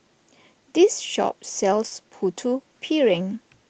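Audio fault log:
1.87–1.93 s, short concealed packet loss: 40 ms of speech missed the decoder's deadline, so the receiver extended the preceding sound, pitched if voiced or as shaped noise if not, then crossfaded back, heard as a brief smear or wobble in the 8 kHz-band call audio.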